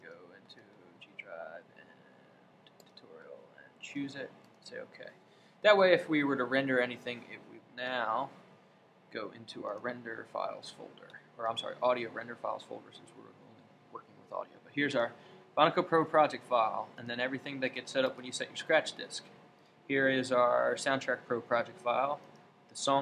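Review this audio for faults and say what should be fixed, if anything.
Nothing here needs fixing; I listened all the way along and heard no faults to flag.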